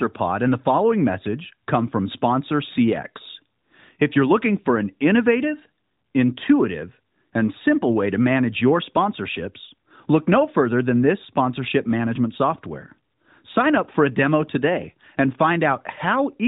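No technical faults can be heard in this speech recording.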